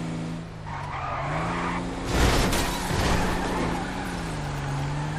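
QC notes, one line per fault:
throughout: MP3 compression, likely from a low bitrate near 64 kbps. Treble is cut off and weak detail swirls watery, not a steady hiss or broadband noise.
0.70–0.92 s and 3.84–4.05 s: frames out of order. Each stretch plays two runs of roughly 105 ms in swapped order, which fits four-frame blocks. The result is a garbled flutter, and unlike a dropout no time is lost.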